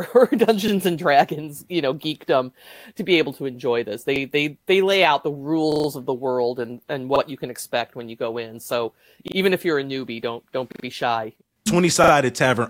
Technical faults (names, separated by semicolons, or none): repeated buffer